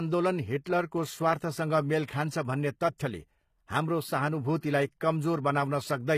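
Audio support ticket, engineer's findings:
HE-AAC compression, throughout. Speech treble gritty, s sounds metallic and lispy, damage plainly audible. Nothing above 14.9 kHz. Likely spectral band replication rebuilding the top band from copied lower bands. Harmonics misalign across the crossover. Consistent with a very low bitrate, around 20 kbps.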